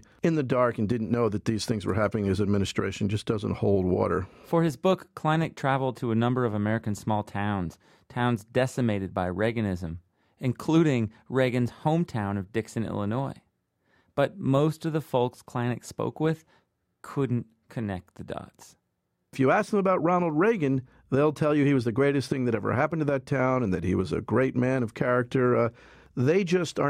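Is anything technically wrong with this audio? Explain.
No, nothing technically wrong can be heard in this speech recording. There is no fault to explain anywhere in the clip.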